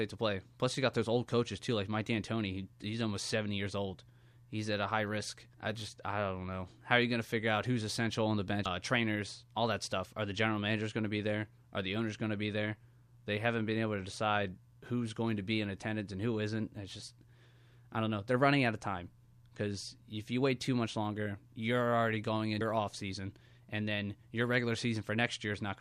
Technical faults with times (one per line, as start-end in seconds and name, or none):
8.65 damaged data in a compressed stream
22.61 damaged data in a compressed stream